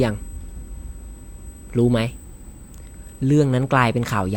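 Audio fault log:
Throughout: USB whine. A steady high-pitched tone sits under the speech at 8 kHz for the whole clip, roughly 30 dB below the speech. The USB bus draws current in 125-microsecond microframes, and that draw leaks into the audio through shared power or ground, which gives a whine at 8 kHz that never changes pitch. On a spectrogram it shows as a thin, unbroken horizontal line at 8 kHz across the whole clip, and the waveform shows nothing obvious because it is so small.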